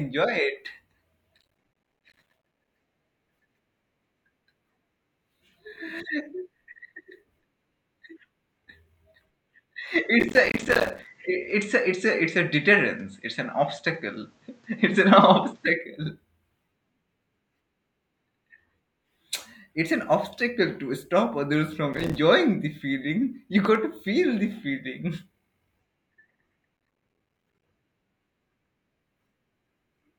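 From 1.38 to 2.68 s, processor overload crackle tears through the speech. Short dropouts to silence pile up, which fits buffers of roughly 5 ms missing their deadlines. At 9.96 s the tone turns duller, with nothing above 8.4 kHz and a faint new noise well below the speech. This is likely an input switched to a poorer device. It lasts until 15.66 s. Within it, from 10.20 to 11.06 s, the crackle returns. Another brief burst follows from 21.93 to 22.18 s. Between 23.65 and 23.77 s, a loud pop strikes twice, peaking about 10 dB above the speech, likely from an electrical step or glitch. The speech continues underneath. From 26.77 to 27.64 s, the gritty crackle returns once more.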